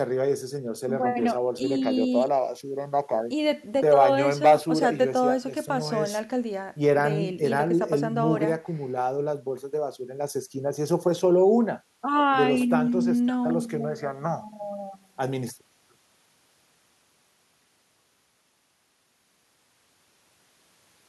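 No technical faults can be heard anywhere in this recording.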